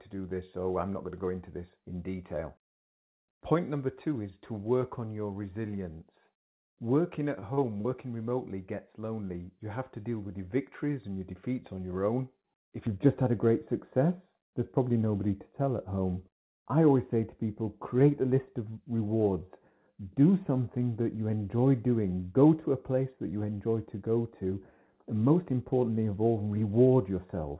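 At 7.40 s a short stall from a late packet holds the sound for about 21 ms. The jitter buffer ran dry and the receiver stretched the last sound until the packet arrived, then resumed without losing audio. A spectrogram shows the harmonics frozen briefly, with a slight dip in the waveform envelope.

Two short concealed packet losses follow, at 7.54 to 7.60 s and 7.81 to 7.88 s. Each drops about 30 ms that the receiver papers over by extending the preceding sound. They are heard as brief smears or wobbles. On a spectrogram they show as smoothed, repetitive patches with a faint seam where real audio returns.

From 12.87 s to the end, de-emphasis applied wrongly puts a smooth downward tilt on the treble, a slope that would reach about 11 dB down by 10 kHz. The sound turns duller and more muffled. Because the call path already stops at 4 kHz, a spectrogram shows the upper band fading gradually toward that ceiling rather than staying even.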